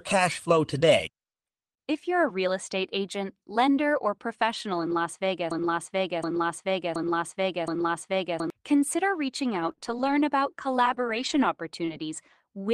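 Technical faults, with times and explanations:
4.73–11.90 s, scattered short gaps: Starting just after "estate agent lender or", about four brief ticks and smears interrupt the speech, none longer than roughly 20 ms. Small pieces of audio went missing in transmission, and the receiver covered each hole by stretching the preceding sound.
5.51–8.50 s, broken-record loop: A 0.72 s fragment plays back-to-back four times, so the speech stutters in place for about three seconds and then jumps ahead. The likely cause is a stall in the player or stream that kept resending its last held piece, losing the speech meant for that time.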